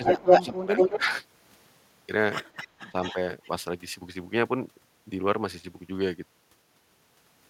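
Speech, with two echo-canceller faults. Echo leak appears at 0.04 to 0.44 s, 0.77 to 0.99 s, 2.53 to 3.16 s and 3.43 to 3.5 s. A delayed copy of the speech returns 212 to 224 ms late. Early on it is louder than the speech, and later it is much fainter. The likely cause is a loudspeaker echo the far end failed to cancel. Speech is suppressed in double talk at 0.0 to 0.2 s, 0.38 to 1.1 s and 2.9 to 2.95 s. The level dips by up to around 15 dB. This is likely the canceller turning down both talkers while they overlap.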